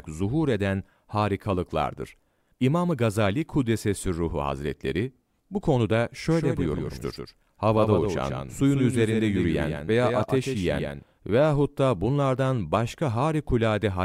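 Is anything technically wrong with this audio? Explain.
Yes. From 6.31 s to 11.03 s, just after "bu konuda" and ending before "veyahut da bunlardan", the speech has a doubled audio track. A second full-band copy runs roughly 150 ms behind the original and about 5 dB quieter, likely because the signal was picked up again through a slower path. Unlike room echo or reverb, this copy has no decay and no added room colour, and it switches on and off abruptly at those boundaries.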